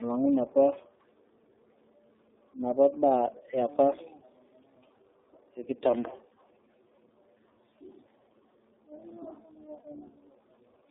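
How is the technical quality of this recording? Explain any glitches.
Quality is poor, with one fault present across the whole clip.

Tandem speech coding, throughout: the sound fits AMR-NB at 6.7 kbit/s passed through G.711 A-law and then iLBC at 13.33 kbit/s, so the second speech coder re-encodes the first one's errors. The speech comes out rough, muffled and warbly, with nothing above 3.8 kHz.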